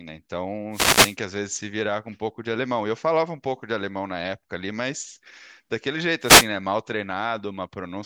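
At 0.71 s a wireless microphone noise hit breaks over the speech for about 0.45 s, ending at 1.17 s. A second one follows from 6.22 to 6.49 s. Each time the radio link fades. Receiver noise swells into a short swish of static.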